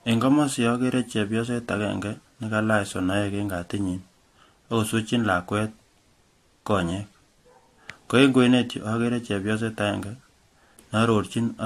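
Throughout the speech the top end is missing, with nothing above 13.9 kHz, and two different sets of codec artefacts sit on top of each other. This likely comes from transcoding between lossy codecs, a Vorbis encode at about 49 kbit/s re-encoded to AAC-LC at 64 kbit/s, which keeps the lower cut-off and stacks the second codec's artefacts on the first's.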